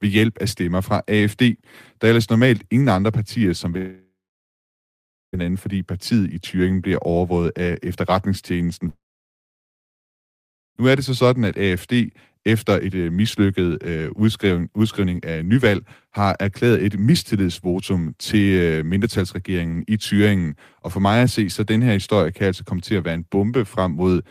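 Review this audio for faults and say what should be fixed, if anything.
Speech cuts out at 3.77 to 5.35 s and again at 8.89 to 10.78 s, likely a long network dropout. Each gap opens with a brief fading buzz or hiss, followed by about 1.2 s and 1.8 s of silence. Speech then resumes with roughly 1.6 s and 1.9 s of content missing. To prevent it, stabilise the network link and add redundancy such as forward error correction or retransmission.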